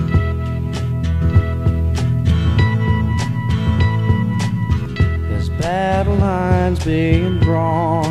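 A doubled audio track runs from 1.22 to 4.86 s. An equally loud copy trails about one second behind, starting and stopping abruptly. Likely cause: a slower second capture path.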